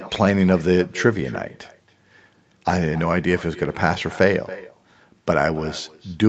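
Throughout the speech, an echo with no canceller returns every phrase about a third of a second later, roughly 18 dB quieter, as a distinct, thin copy rather than the smeared tail of room reverb.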